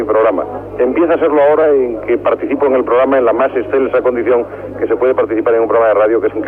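Nothing goes wrong in this one: there are no dropouts, glitches or other faults to point to anywhere in the audio.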